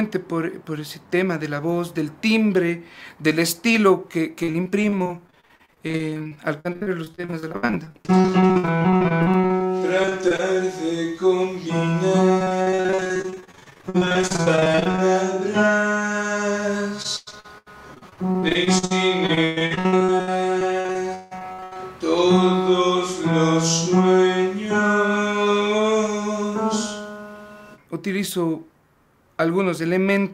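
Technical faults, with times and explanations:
4.43–9.62 s, 10.02–10.41 s, 12.39–15.01 s and 17.02–21.79 s: repeated packet loss (robotic sound). Audio keeps dropping out in quick little holes, each patched by stretching the last bit of sound, so roughly a quarter to two-fifths of each stretch is filler. That gives the choppy, robotic texture. Most holes are tiny, but one near the end runs to 165 ms.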